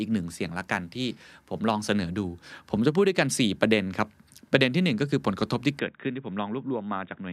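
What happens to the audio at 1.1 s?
Nothing goes wrong at 1.1 s; the speech plays through that moment intact, with no dropout, click or distortion to be heard.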